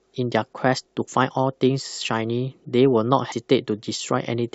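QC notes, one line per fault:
3.31 s, compressed frames skipped: the speech jumps ahead by about a tenth of a second, consistent with several missing 23.2 ms frames.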